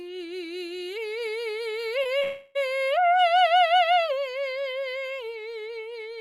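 Around 2.03 to 2.07 s there's a short concealed packet loss. About two hundredths of a second of the music never reached the decoder in time, and the receiver patched the gap by carrying the previous sound forward before blending back in. It comes across as a tiny smear in the music. The same thing happens again at 2.19 to 2.23 s, this time with a slightly longer patch of about 20 ms.

Right after that second blip, from 2.23 to 2.57 s, the music gives way to a stretched continuation of whatever was sounding just before. It runs for roughly a third of a second without ever dropping to silence, and then the real music comes back further along. That's most likely a long network dropout: nothing arrived for that stretch, so the receiver kept extending the last sound instead of playing the missing part.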